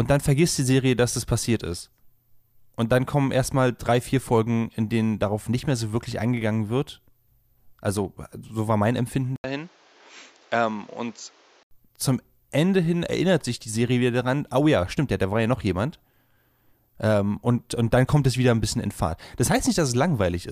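Speech, with a sudden change in tone from 9.36 to 11.71 s. After an 80 ms silence, the sound turns duller and quieter. Nothing reaches above 7.6 kHz, and a new noise floor sits roughly 30 dB down. The likely cause is an input switched to a poorer device.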